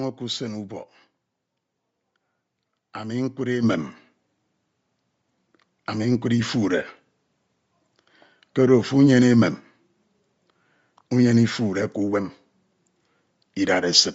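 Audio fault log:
throughout, Bluetooth LC3 compression: The speech was most likely carried over a Bluetooth LE Audio link coded with LC3 at around 32 kbps in 10 ms frames. At that rate much of the upper spectrum is discarded and filled with noise, giving the voice a plainly audible breathy, grainy edge.
3.63 s, microphone volume stepped up: The call software judged the microphone too quiet and raised the device's input volume in a single step of about 6 dB. Voice and background noise jump louder together at that instant, an abrupt level shift with no fade.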